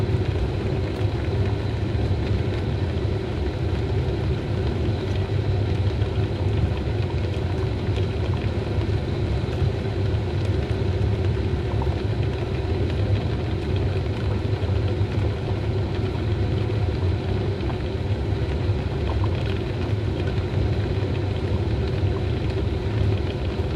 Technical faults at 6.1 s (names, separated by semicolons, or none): none